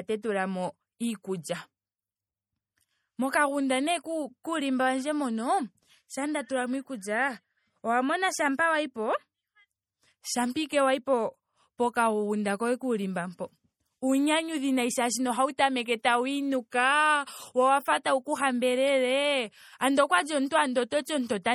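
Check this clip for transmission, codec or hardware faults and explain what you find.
The clip has two codec faults: MP3 compression throughout, and one pre-echo at 16.03 s.

MP3 compression damage is plainly audible for the whole length of the speech, and lossy MP3 coding is the likely cause. The degree of damage fits a low bitrate around 48 kbps. With so few bits, the encoder drops weak spectral lines that flicker on and off between frames. The result is a watery, swirling texture, with metallic chirps on s sounds.

Pre-echo occurs at 16.03 s. A transform codec spreads its quantisation noise across a whole block. When a sharp onset lands late in a block, noise sized for the loud part also fills the quiet moment just before it. Here a short hiss leads the attack by about 14 ms, and the onset itself sounds softened and smeared.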